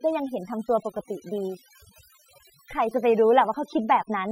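Overdone noise removal runs through the whole speech clip: a noise reduction stage set far too aggressively pulls individual frequency bands down whenever they sit near its noise estimate, taking quiet speech detail with them. Pauses drop to near silence dotted with twinkling specks.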